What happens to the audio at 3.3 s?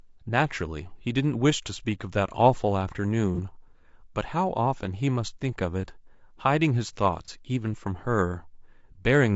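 From 3.35 to 3.39 s there is AAC frame loss with concealment. The decoder patches what fits a single lost frame by reusing the previous spectrum, which leaves a brief smeared, noisy blur rather than a clean gap of silence. Underneath, the whole clip carries rough, grainy speech with noise between harmonics and a thin, synthetic top. That is likely low-delay AAC compression at a rate consistent with about 32 kbps, and it persists everywhere rather than briefly.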